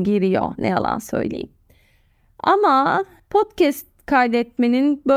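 Nothing in the way of a technical fault turns up anywhere in this bit of speech, so there's really nothing here to flag.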